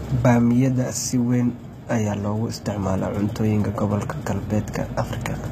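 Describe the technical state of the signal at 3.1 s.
At 3.1 s, as throughout, HE-AAC compression is plainly audible, likely from a very low bitrate: treble up to 14.9 kHz is rebuilt from copied lower bands, so sibilants sound gritty.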